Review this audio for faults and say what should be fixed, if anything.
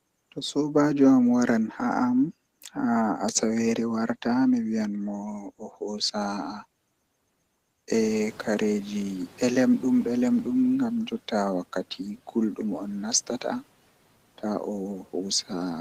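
At 7.93 s a noise suppressor catching up is audible. The room noise under this speech rises by about 15 dB around 8 s, and the suppressor's noise estimate lags behind the jump. For 2.67 s the louder background passes with less reduction, then sinks as the estimate adapts, settling at about 7 dB of cut by 10.6 s. To prevent this, give the suppressor a faster noise-tracking rate for sudden rises in the noise floor.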